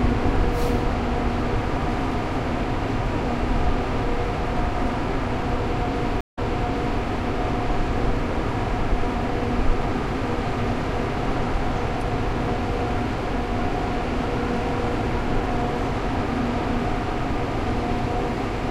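At 6.21 s the sound cuts to silence for 0.16 s. This is a stream reconnect. The connection dropped, and the player restarted its decoder mid-stream. Playback resumes 0.65 s earlier, so a brief stretch repeats, settling by 7.02 s.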